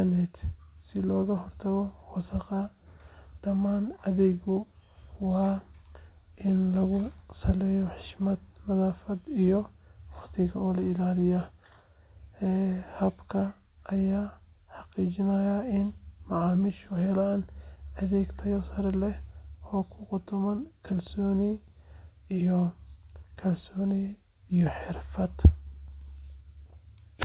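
No faults in this speech; the call path is band-limited to 4 kHz, which fits G.711 mu-law telephone coding.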